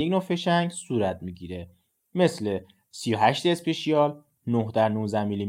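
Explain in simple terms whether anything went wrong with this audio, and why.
Nothing went wrong with this recording of speech: there are no interruptions, glitches or other technical problems anywhere in it.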